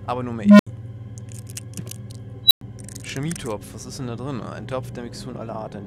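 At 0.42 s an unstable filter, a recursive stage with runaway feedback, swells a low tone near 200 Hz over about 177 ms into clipping, then overflows and drops out for 73 ms. At 2.45 s it recurs near 4 kHz, building in 56 ms, then silent 104 ms.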